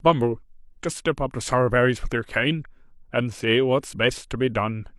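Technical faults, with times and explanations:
No technical faults are audible in this speech recording.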